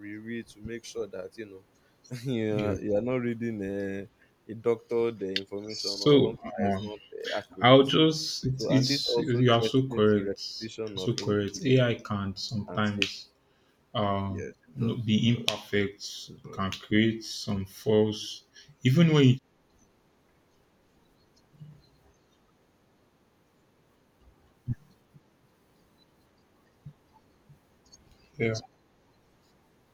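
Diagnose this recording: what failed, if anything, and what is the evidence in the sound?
The speech ducks in and out in several places: 5.74 to 7.61 s, 8.52 to 13.35 s (the worst stretch, with roughly two seconds of it pulled down by something like 25 dB), 14.26 to 15.51 s, a brief shallow dip at 16.43 to 16.51 s, and a short, deep hole around 18.32 to 18.47 s. The stage is call processing, and it's likely speech suppressed in double talk. The far end was talking over this speaker, and the echo canceller treated the voice as echo and clamped it down.

There's also background gated by the echo canceller at 25.0 to 25.11 s, again in call processing. The room tone drops by about 12 dB for roughly a tenth of a second, then comes straight back. That's the canceller's suppressor clamping the mic hard while the loudspeaker was active and releasing once it decided the echo had gone.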